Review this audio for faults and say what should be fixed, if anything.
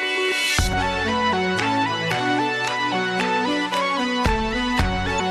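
Damaged data in a compressed stream at 0.69–0.74 s and 5.16–5.21 s: corrupted frames make the decoder lose sync and hunt for the next header, leaving brief blips. Fix it by re-encoding from an intact source and checking file integrity before distribution.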